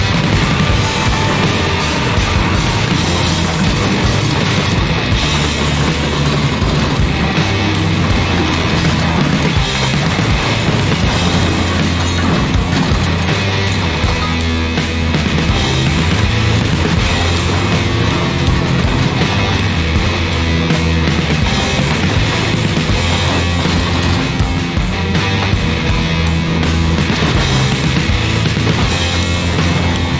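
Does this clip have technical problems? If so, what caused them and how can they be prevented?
No technical problems are audible.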